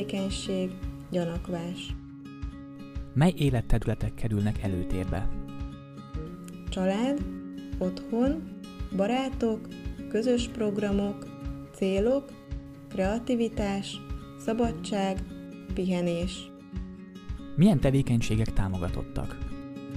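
No technical faults can be heard in this clip.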